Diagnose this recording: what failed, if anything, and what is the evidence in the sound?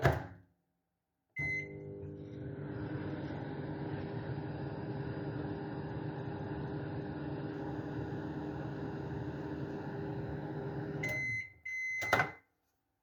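Adaptive stream at a lower bitrate, 1.53 to 7.53 s: the network slowed and the player switched to a cheaper encoding. The treble abruptly stops at 7.1 kHz and codec artefacts thicken, with no gap. This fits MP3 dropping from 128 to 32 kbit/s.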